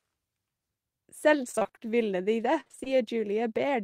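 Between 1.51 and 1.91 s the speech turns choppy and robotic, with fragments dropping out in quick succession. A second, similar robotic stretch runs from 2.60 to 2.88 s. Both are repeated packet loss: audio kept arriving late or not at all, and each hole was patched by stretching the previous sound. Roughly half of each stretch is concealed rather than real, with holes up to 24 ms in the first and 52 ms in the second.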